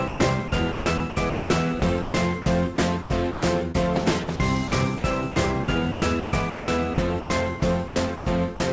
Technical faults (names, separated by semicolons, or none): sound chopped by the voice detector